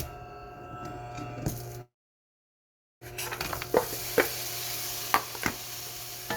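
At 1.81 s the sound breaks off. The last moment is stretched into a brief fading buzz. Then the clip goes quiet for about 1.1 s. The sound returns at 3.04 s, but it does not pick up where it stopped. About 1.2 s of material is simply gone. This is a long network dropout, likely caused by packets failing to arrive. The receiver covered the gap with a fading continuation, then silence.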